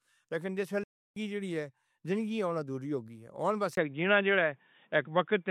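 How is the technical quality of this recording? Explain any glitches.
The recording has two clear faults: a dropout early on and a change in tone near the end.

From 0.83 to 1.16 s, just after "لیکن جس", the speech halts for about 0.33 s, a playback stall, then resumes with "جیڑی اے زندگی ہن". The likely cause is the player running short of data or being blocked, leaving the output silent until it caught up.

From 3.75 s to the end, the sound turns duller, consistent with the input switching to a poorer device. A 20 ms gap marks the switch. After it the band narrows, the level shifts by about 5 dB, and a faint new noise floor sits well beneath the speech.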